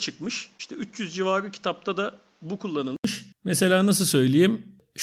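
From the top of the clip until about 3.04 s the speech sounds dull and a bit boxy. Nothing gets through above 7.6 kHz, there's a fresh background noise sitting roughly 35 dB under the signal, and everything is around 5 dB quieter. Then an 80 ms gap and the sound opens right up. That's most likely an input switched to a poorer device partway through the recording, with the system then jumping back to the better mic at the switch.

Inside that stretch, at 0.57 to 0.61 s, there's a short concealed packet loss. About 20 ms of audio never made it to the decoder, and the receiver patched roughly 17 ms of it by carrying the preceding sound forward before blending back into the real signal. You hear it as a quick smear or little wobble.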